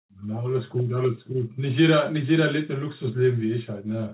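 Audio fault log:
No faults are heard in this speech clip. It has passed through a WebRTC call path, and nothing is heard above 4 kHz, a narrowband limit that fits the G.711 mu-law codec at 64 kbps.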